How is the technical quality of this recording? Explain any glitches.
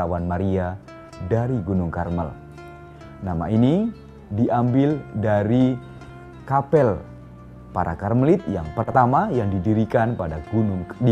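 The recording has two brief glitches. Frames out of order at 5.97 to 6.11 s and 8.83 to 8.95 s: neighbouring blocks, roughly 60 ms then 40 ms, got swapped, giving a garbled flutter.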